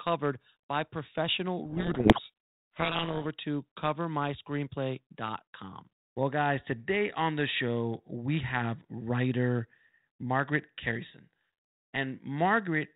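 From 1.66 to 3.26 s there's a codec payload misread: the G.726 code words arrive in the wrong bit order, so the speech drowns in harsh, grinding distortion.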